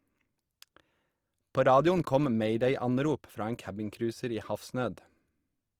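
From start to finish the speech has a rough, grainy texture, while the full bandwidth stays. This is likely Opus compression in its music mode, filling starved bands with noise, which fits a rate near 24 kbps.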